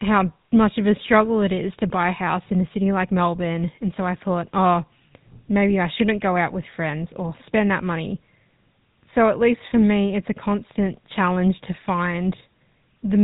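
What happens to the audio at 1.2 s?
The GSM full-rate codec is active at 1.2 s and across the whole clip. It models the vocal tract and drives it with sparse, regularly spaced pulses, cutting everything above 4 kHz, so the speech sounds plainly buzzy and gravelly, consistent with roughly 13 kbps coding.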